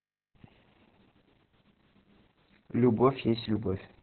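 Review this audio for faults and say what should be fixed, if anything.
Opus voice compression is present throughout: nothing reaches above about 4.2 kHz, and the speech sounds hoarse and slightly robotic, which fits narrowband SILK coding near 6 kbps. A simple low-pass filter would muffle without that coarse, buzzy texture. Encode at a higher bitrate to prevent this.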